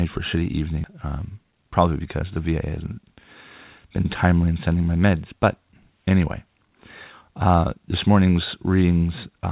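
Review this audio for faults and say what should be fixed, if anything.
Just after "for a shitty", at 0.84 to 0.86 s, there is a skip ahead. About a second of speech is missing. Nothing fills the gap. The two sides join almost directly. The jitter buffer discarded a backlog of waiting audio. Size the buffer so bursts don't overflow it.

From 0.94 to 2.24 s comes a jitter buffer speed-up. Speech runs at 112 percent with unchanged pitch and sounds hurried. The receiver cut short pitch-period pieces repeatedly, removing roughly 150 ms to shed excess delay. Smooth packet delivery so the buffer doesn't overfill.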